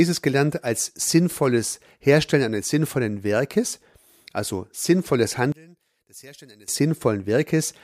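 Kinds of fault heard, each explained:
One channel inverted: From 5.52 to 6.68 s, right after "also sinnvolles", the speech abruptly falls away by about 25 dB, leaving only a faint trace of itself before full level returns. The likely cause is one stereo channel running with reversed polarity. When the two channels are summed to mono, the centred voice, nearly identical on both sides, cancels itself out, and only the small difference between the channels survives.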